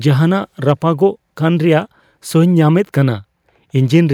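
No technical faults are audible.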